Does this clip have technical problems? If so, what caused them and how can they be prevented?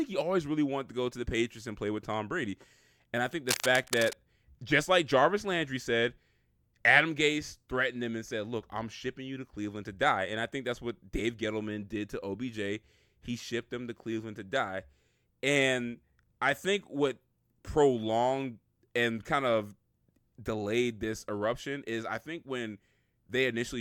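Yes. Between "I think" and "just like", from 3.49 to 4.22 s, dense, uneven scratching sits just below the speech: cable scratch noise, likely from a worn cable or connector moving. Replace worn leads and fix connectors firmly so they can't shift while recording.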